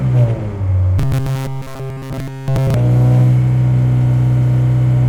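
From 0.99 to 2.74 s, the sound turns into robotic sound from repeated short buffers. A rigid, metallic buzz at 133 Hz takes over the whole stretch. The natural texture of the sounds vanishes, though their rough shape still comes through. The likely cause is fresh audio arriving too slowly. The playback fills each gap by looping a tiny slice of about 7.5 ms, the period of that buzz, while real audio is dropped.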